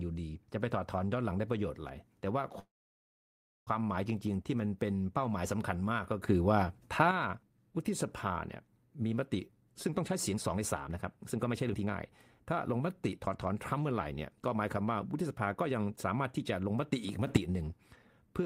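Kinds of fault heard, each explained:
call audio freeze: Packets were likely held up in transit and the jitter buffer ran dry, so the receiver had to fill the gap itself. From 2.59 to 3.69 s the sound stops being carried forward and fades away, leaving about 0.98 s of near silence within a filled stretch of roughly 1.07 s. When delivery resumes the speech picks up exactly where it broke off, with nothing lost but the whole call now running about 1.07 s later.
sudden gain jump: The digital gain was likely switched in a single step, with no ramp between the old and new settings. Speech and background noise leap up in level together, about 7 dB louder from 6.28 to 7.11 s and about 9 dB louder in the short burst from 17.27 to 17.37 s. Because the noise floor rises along with the speech, the change sounds like a fader being snapped up rather than the talker getting louder.
jitter buffer speed-up: The jitter buffer had built up more audio than its target, so the receiver trimmed it back by cutting out many short pitch-period-sized pieces in quick succession. 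The speech keeps its normal pitch but sounds rushed, running at 123% speed from 9.38 to 11.89 s and at 111% from 12.45 to 16.74 s. Each stretch removes around half a second of delay, and the pacing of the speech tightens noticeably while it happens.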